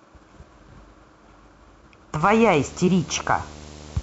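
Video or display buzz enters at 2.21 s and runs to the end of the clip at 4.03 s. A screen or its video cable is coupling interference into the audio path, so a buzz at the 75 Hz field rate sits under the speech, with a gritty hash riding above it. It sits roughly 20 dB below the speech.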